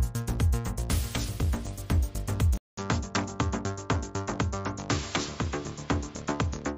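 At 2.57 s there's a 200 ms gap, then the sound turns duller, cuts off above 7.6 kHz, drops a bit in level and picks up faint new background noise, likely an input switched to a poorer device.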